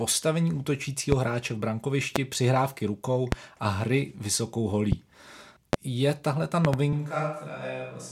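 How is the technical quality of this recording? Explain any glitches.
The recording has two kinds of fault: repeated loud pops and a late change to a more distant microphone.

Loud pops hit at 1.12, 2.16, 3.32, 4.92, 5.73 and 6.65 s, the last a double pop lasting to 6.76 s. A sudden voltage pulse, likely from a plug, switch or static, lands on the signal, giving sharp thumps about 15 to 20 dB above the speech, which continues underneath.

A switch to a distant microphone occurs at 6.93 s and lasts to the end. The close microphone's signal drops out, likely replaced by a far one, so the voice turns abruptly roomy and thinner, about 5 dB quieter, with room noise rising to roughly 35 dB below the speech.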